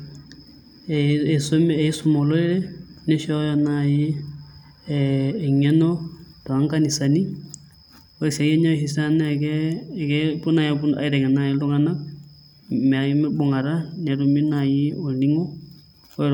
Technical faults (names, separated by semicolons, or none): none